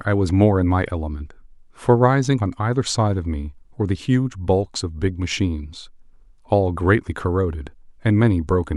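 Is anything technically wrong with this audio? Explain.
No, nothing is technically wrong with this audio.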